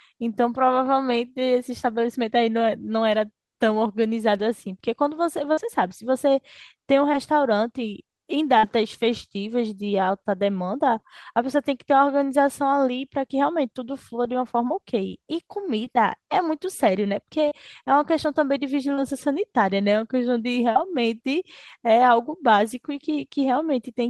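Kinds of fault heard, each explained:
Short concealed packet loss: A few hundredths of a second of the speech failed to arrive in time for playback. The receiver bridged each hole by extending the sound just before it, then merged back into the real signal. Here this happens at 5.53, 7.12, 15.85, 17.48, 18.94 and 20.72 s, each patch lasting about 10 to 40 ms. Each one comes across as a brief smear or wobble in the speech.
Burst of packet loss: At 8.58 s, a longer stretch of about 50 ms went missing in one go. The receiver carried the preceding sound forward for roughly 49 ms and let it die away as the gap went on. Playback then picks up later in the speech, so that slice is simply gone. It is heard as a short held or fading patch followed by a small jump.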